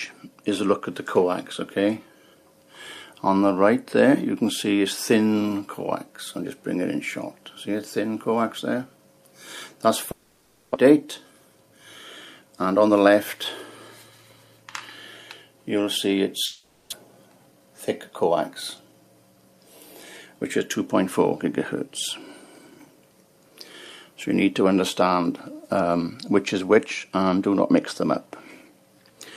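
Twice the audio smears into a fading buzz and then resumes with part of it missing, from 10.11 to 10.76 s and 16.45 to 16.94 s. The concealment fills about 630 ms and 470 ms, and roughly 400 ms of sound is lost each time. This is likely a long network dropout, with the receiver extending the last sound until packets returned. Shortly after each gap the sound runs hurried at unchanged pitch: 10.84 to 11.78 s at 110% speed, 12.42 to 13.14 s at 113%, and 17.52 to 18.30 s at 105%. That is jitter buffer speed-up, where the receiver trims short pitch-period pieces to drain the audio that piled up after the late packets arrived together. It removes about a tenth of a second in each of the first two stretches and a few hundredths in the third.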